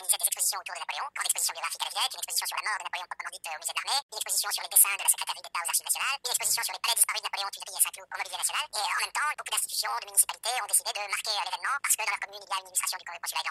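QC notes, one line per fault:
Throughout, wrong sample rate: the sound runs twice as fast and a full octave high, consistent with 24 kHz material played at 48 kHz. Pitch and tempo shift together, unlike a pitch-shift or time-stretch.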